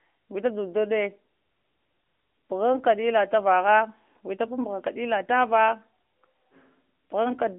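From start to finish the speech has passed through the AMR narrowband mobile codec, the AMR-NB coder used on 2G and 3G phone calls. It rebuilds the voice from a vocal-tract model excited by sparse pulses, and its damage is plainly audible. Nothing above 3.5 kHz survives, and the band sits at roughly 250 Hz to 3.4 kHz, giving a thin telephone tone. The coder runs in an upper mode around 10.2 kbps.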